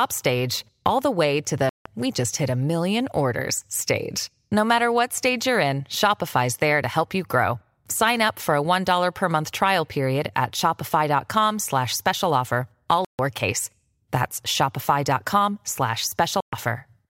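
The speech cuts to silence three times, at 1.69–1.86 s, 13.05–13.19 s and 16.41–16.53 s, for roughly 160, 140 and 120 ms. The gaps are sharp-edged and speech resumes further along, the pattern of a likely Bluetooth dropout, with late packets discarded before playback.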